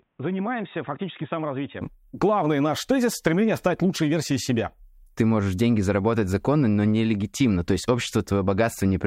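A speech recording opens with its first 1.81 seconds dull and boxy, with nothing above 3.8 kHz, a few dB quieter than what follows, and carrying its own faint noise floor well below the speech. At 1.81 s the sound clears with no gap. The likely cause is an input switched to a poorer device. A simple low-pass filter would only cut the top end, but here bandwidth, level and background noise all change together at one instant.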